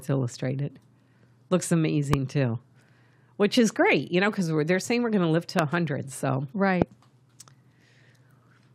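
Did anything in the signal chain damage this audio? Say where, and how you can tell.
Yes. Three loud pops break into the speech at 2.13–2.16 s, at 5.59–5.61 s just after "going to live to", and at 6.82–6.84 s. Each is a single sharp thump lasting about 20 ms, peaking roughly 20 dB above the speech, which carries on unbroken underneath. That points to a sudden voltage pulse added in the analogue wiring, likely from a loose plug, a switch or a static discharge, which the following circuits then shaped into a pop.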